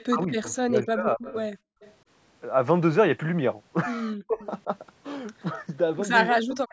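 From the start to 0.56 s, a faint delayed copy of the speech trails it by 260 ms, roughly 25 dB down. This is an echo leak, likely from a loudspeaker whose echo canceller let part of the far side's sound back in. The same echo returns at 1.8 to 1.94 s, 4.41 to 4.46 s and 6.69 to 6.72 s, each time at roughly 25 to 30 dB down.

From 0.09 to 1.35 s, the speech dips repeatedly, by as much as roughly 30 dB, for about 0.7 s in total. This is speech suppressed in double talk. Both sides were likely talking at once, and the canceller turned the near talker down with the echo. Shorter dips follow at 4.27 to 4.42 s, about 20 dB deep, and at 6.44 to 6.72 s, about 40 dB deep.

From 1.63 to 1.8 s, the room sound drops out for about 0.15 s, by as much as about 38 dB. This is background gated by the echo canceller. It clamped the microphone hard while the loudspeaker played, then let go.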